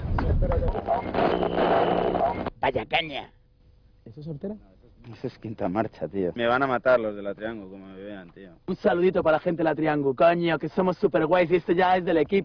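No technical faults detected.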